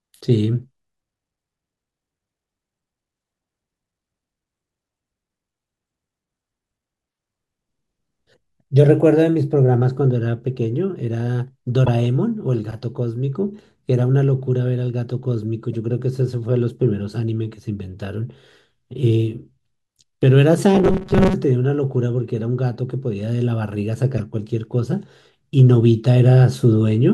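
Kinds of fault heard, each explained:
Corrupt frame decoded: damaged compressed frames got played anyway, so quick chirpy noise blips pop out near 11.85, 15.71 and 24.18 seconds.
Robotic sound from repeated short buffers: for about 0.6 s from 20.75 s the speech becomes a rigid 188 Hz metallic buzz, likely short chunks replayed over skipped audio.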